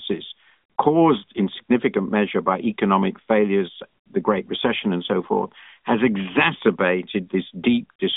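There are no technical faults to describe, so there is nothing to place in time order.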